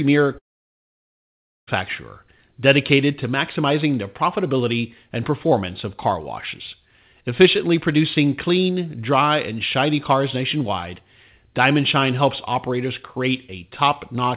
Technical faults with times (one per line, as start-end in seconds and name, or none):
0.38-1.69 long network dropout